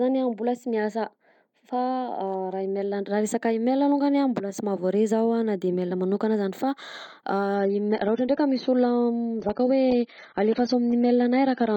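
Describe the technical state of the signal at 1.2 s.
At 1.2 s the speech signal is intact, with no audible technical fault at that moment.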